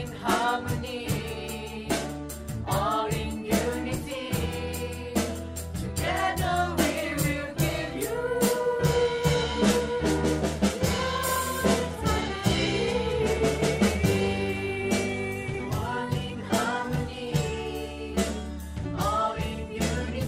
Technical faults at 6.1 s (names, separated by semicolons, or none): none